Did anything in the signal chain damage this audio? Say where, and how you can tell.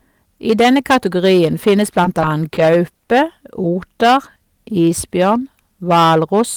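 Yes. Hard clipping runs throughout, driven about 13 dB past full scale at the converter or format stage. About one sample in twenty is cut flat, adding harsh high harmonics.

Short stalls from a late packet occur at 2.54–2.60 s and 3.05–3.12 s. The jitter buffer ran dry, so sound was held for 30 ms and 40 ms, with nothing lost.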